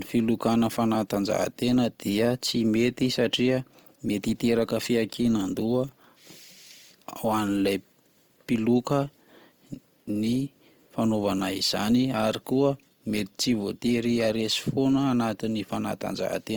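From start to finish the speech carries a rough, grainy texture. It sounds noisy rather than clean, and the damage is plainly audible. The likely cause is Opus compression in its music (CELT) mode at a low rate, which fits about 24 kbps. Short of bits, the encoder keeps each band's energy but fills the detail with folded or noise-like content. On a spectrogram the bands stay filled, with few holes, up to a cut-off near 20.2 kHz, but they look smeared and speckled instead of finely structured.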